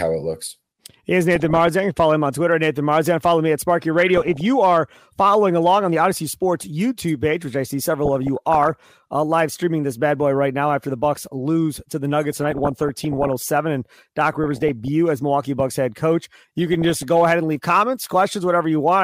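Speech with DAB burbling at 1.35–1.68 s, 4.00–4.41 s (before "you are following along"), 8.05–8.80 s, 12.32–13.33 s (after "lose to the"), 14.32–14.88 s and 16.61–17.03 s (between "head coach" and "go ahead and leave"). Weak-reception bit errors reach the MP2 data, putting short noise blips in individual sub-bands and making sub-bands jump in level for up to a frame.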